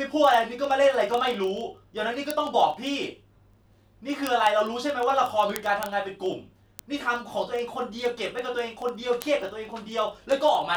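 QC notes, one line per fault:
0.11–10.75 s, word clock ticks: a steady stream of sharp, uneven little clicks about every 30 ms, a few hundred in all. The receiving clock's drifting several hundred ppm off the sender's, so each slip drops or repeats a single sample.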